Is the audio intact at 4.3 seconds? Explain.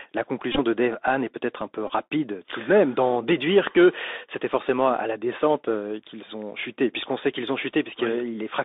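No. At 4.3 seconds, as throughout, the speech carries Bluetooth CVSD headset codec damage. Each sample is coded as one adaptive up-or-down step, apparently at 64 kbps, and the band is held to about 250 Hz to 3.7 kHz, giving a muffled, grainy, plainly audible degradation.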